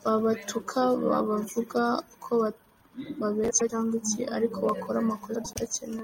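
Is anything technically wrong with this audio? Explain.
Yes. This speech has frames out of order at 3.50–3.71 s, just before "iki ariko bakora", and at 5.35–5.57 s, just after it. Two adjacent runs of about 96 ms each were decoded in swapped order, so each stretch plays its halves exchanged, producing a garbled flutter, and no time is lost.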